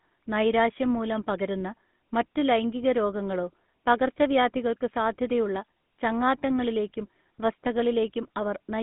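GSM full-rate codec damage runs through the whole of this speech clip, from start to finish. The codec rebuilds the voice from a vocal-tract model excited by evenly spaced pulses, discarding two of every three excitation samples, so the speech carries a plainly audible buzzy, gravelly roughness, which fits a 13 kbps full-rate stream. Nothing survives above 3.8 kHz, and the line band sits at roughly 150 Hz to 3.6 kHz, leaving the sound thin and muffled.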